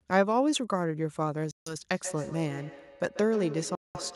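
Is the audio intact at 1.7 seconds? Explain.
No. At 1.7 seconds the speech sits inside a silent hole running from 1.51 to 1.75 s, about 0.24 s long. When the speech returns it has moved on, so roughly 0.15 s of material is simply missing. This is a Bluetooth dropout, and the likely cause is wireless audio packets reaching the headphones too late to play, consistent with around ten lost frames. The output went silent until valid packets arrived again.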